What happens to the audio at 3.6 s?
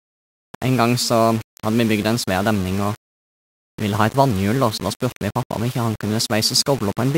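At 3.6 s the speech carries the grainy, signal-following distortion present across the whole clip, most likely low bit depth without dither. Rounding to very few levels, which fits roughly 5-bit rounding, leaves error around 20 dB below the signal, so quiet stretches turn gritty and sputter.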